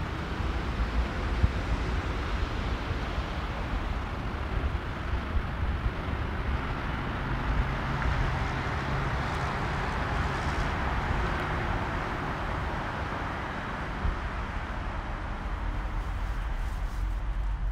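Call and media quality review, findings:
Sudden rush from 3.95 s to 7.71 s: audio runs about 1.55x faster, pitch unchanged. Time-stretched section, likely a stretch stage fitting audio to a shorter length, dropping short slices to speed it up without altering pitch. Normal pace resumes abruptly at 7.71 s.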